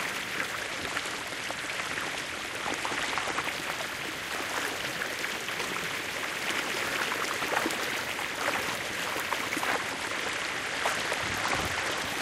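From 0.60 to 3.42 s and again from 9.72 to 12.05 s, a Bluetooth SBC bit pool drop dulls the treble and adds grit, which fits a fall from about 28 to 13, near 102 kbps.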